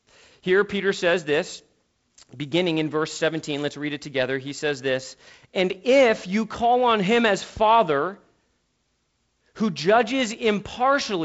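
No technical faults are audible.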